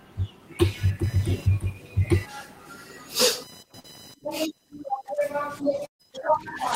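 From 0.65 s to the end, a faint buzzing chirp sits under the speech, pulsing at around 1 kHz and roughly 25 dB below it. This is computer activity noise: processor, graphics or mouse load shifting the ground the audio circuit shares, so the buzz follows the machine's workload, not the voice.

At 3.79 to 3.86 s there is a brief smear, a wobble where a small piece of speech seems to blur over. This is short concealed packet loss: about 40 ms of audio never reached the decoder in time, and the receiver papered over roughly 43 ms by extending the preceding sound before blending back in.

At 5.86 to 6.01 s the last bit of speech is held over and fades, and about 110 ms of it is effectively silent before the audio picks up further along. This is a burst of packet loss: around 140 ms went missing, the receiver stretched the last sound across about 135 ms while lowering it, and that stretch of speech is lost.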